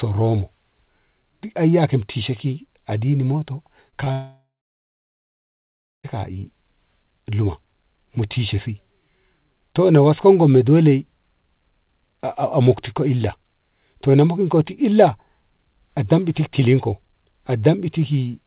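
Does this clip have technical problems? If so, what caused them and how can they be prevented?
Yes. There are two short concealed packet losses right after "e ki ajini moto". One runs from 3.90 to 3.94 s and the other from 4.04 to 4.08 s. Each covers about 20 ms of missing audio. The receiver extended the preceding sound to fill each gap, then blended back into the real signal. Each one is heard as a brief smear or wobble. A steadier network path with less packet loss would prevent these, as would a codec with in-band redundancy.

Then comes a long network dropout from 4.12 to 6.05 s, about 1.9 s with no audio arriving. The receiver first continues the last sound as a fading buzz or hiss. After that, about 1.55 s of silence remains. The speech resumes later, and the part spoken during the gap is gone. The cause is likely a stall on the network link, such as congestion or a brief loss of connection. 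The call path itself is band-limited to 4 kHz, which fits G.711 A-law at 64 kbps. A more stable connection, for example wired rather than wireless, would prevent such dropouts.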